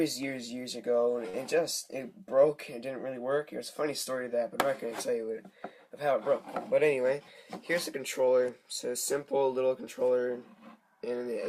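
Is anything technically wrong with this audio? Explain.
Yes, there are two timing faults.

A short stall from a late packet occurs from 1.29 to 1.36 s. A packet missed its playout slot, so the jitter buffer ran dry. The receiver filled the gap by extending the last bit of sound for about 43 ms, then resumed where it left off once the packet turned up. Nothing is lost, but the sound at that point hangs on a moment too long, with a faint buzzy or dipped quality. Playback then runs about 43 ms later than before.

A jitter buffer speed-up runs from 6.97 to 7.35 s. The buffer had built up more audio than its target, so the receiver trimmed it back by cutting out many tiny pitch-period-sized slices in quick succession, roughly 50 ms in total. Across that stretch the audio plays at about 112% speed with the pitch unchanged, giving it a briefly rushed, hurried feel.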